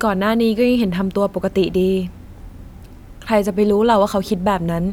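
No technical faults can be heard in this recording.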